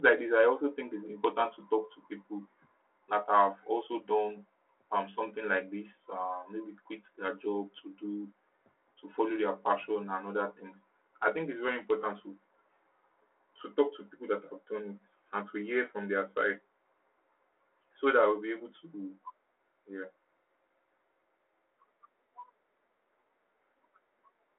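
The speech has no technical faults. It comes over a telephone line at 300 Hz to 3.4 kHz, coded as G.726 ADPCM at 32 kbit/s, so nothing above about 3.9 kHz is present and the coding leaves only light damage.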